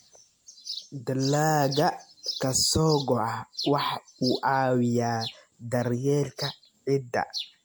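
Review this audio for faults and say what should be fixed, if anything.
Throughout the speech, the sound is swirly, smeared and hollow, with blurred attacks and nothing above 19.9 kHz. This is likely generation loss from around seven MP3 re-encodes, fitting a 96 kbit/s chain. To prevent it, keep the audio in a lossless format while editing and encode to MP3 only once, from the original.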